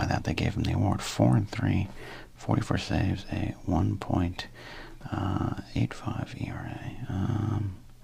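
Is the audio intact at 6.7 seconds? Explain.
Yes, the audio is intact at 6.7 seconds, with no dropout, click, distortion or other fault audible at that point.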